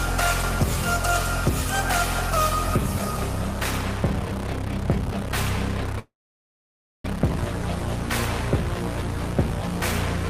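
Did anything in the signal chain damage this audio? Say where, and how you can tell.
Yes, at the network stage: a call audio freeze from 5.99 to 7.06 s. The last sound is drawn out into a brief fading tail, then about 0.94 s of silence. Unlike packet loss, the audio resumes exactly where it stopped, nothing skipped, pushed about 1.05 s later, likely from packets stalling in transit until the jitter buffer emptied.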